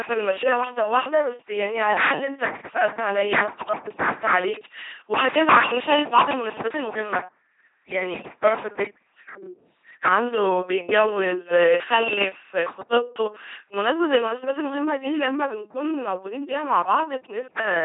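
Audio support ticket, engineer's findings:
LPC-10 vocoder, whole clip: buzzy robotic speech, heavy damage, nothing above 3.8 kHz. Each frame forced to pulse-train buzz or noise hiss through a short filter; fits a 2.4 kbit/s link.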